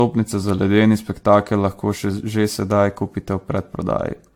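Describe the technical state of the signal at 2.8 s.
At 2.8 s the speech carries generation loss, as it does for the whole clip: swirly, hollow and smeared, with blurred attacks, likely from around ten AAC re-encodes at a rate that fits 96 kbit/s. A spectrogram shows nothing above 18.9 kHz.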